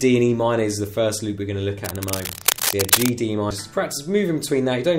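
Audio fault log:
1.84–3.10 s, cable scratch noise: dense, uneven scratching bursts at about the signal's own level, likely from a worn cable or connector being moved.
3.50 s, compressed frames skipped: the audio jumps ahead by roughly 70 ms, consistent with two 32 ms frames left out.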